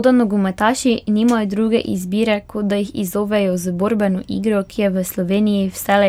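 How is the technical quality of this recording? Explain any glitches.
Nothing's wrong with this recording as far as I can hear, so there aren't any glitches to explain here.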